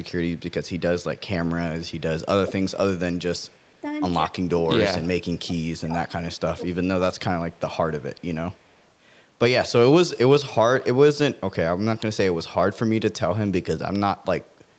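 From 0.37 to 1.2 s, 2.46 to 2.53 s and 3.38 to 3.8 s there is echo leak: a copy of the speech returns 195 ms late, likely because the far end's echo canceller left loudspeaker pickup in its microphone signal. It is very faint, except for a louder burst at 2.46 s. Speech is then suppressed in double talk from 4.27 to 4.7 s, 5.09 to 6.24 s and 6.55 to 7.25 s. The level drops in pieces by up to about 25 dB, likely because the canceller ducked the talker during overlapping speech. The faint 195 ms echo returns from 8.17 to 8.85 s.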